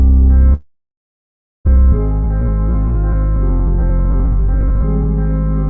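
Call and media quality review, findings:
Long network dropout, 0.54 to 1.69 s. The last sound smears into a fading buzz, then near-silence for roughly a second. About 0.6 s of audio never comes back, and latency jumps by around half a second. Likely a network outage with concealment filling the gap.

Jitter buffer speed-up, 1.76 to 5.05 s. Playback is hurried at about 107% speed with pitch unchanged. The buffer is draining the backlog from the dropout by trimming pitch-period slices, about 200 ms in total. Audio stays band-limited to 8 kHz throughout, which fits a G.722 wideband path.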